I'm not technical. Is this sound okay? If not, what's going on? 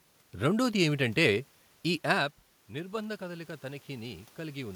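No, not quite. Around 2 seconds the talker seems to drift away from the mic, and from 2.71 to 4.71 s you get automatic gain rising: the system turns itself up slowly to compensate, so the voice and the room noise behind it swell together.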